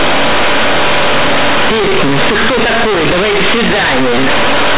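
From the first moment to the end, this speech is a case of companded audio read as linear: mu-law bytes are being played as raw 8-bit samples with no expansion. Every sign flip jumps across half the range, so it's loud, buzzy and mangled, with heavy hiss in the pauses.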